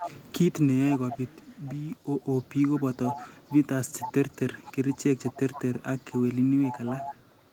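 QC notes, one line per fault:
0.00–0.52, 0.90–2.62, 3.05–3.54, 4.00–5.78, 6.11–6.22 and 6.61 s to the end, echo leak: a faint second copy of the speech trails it by 473 ms in each stretch, roughly 10 to 20 dB below the main voice and weakest around 6.1 s. This is likely a far-end loudspeaker feeding its own microphone, with the echo canceller letting part of that pickup through and sending it back down the line.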